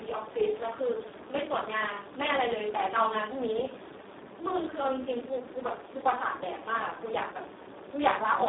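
From start to finish the speech sounds hoarse, buzzy and partly robotic, squeezed into a narrow telephone-like band of about 300 Hz to 3.6 kHz with nothing at all above 3.8 kHz. This is heavy Speex codec damage: the CELP coder has so few bits for its excitation that the result approaches a vocoder, which fits a very low setting of around 4 kbps.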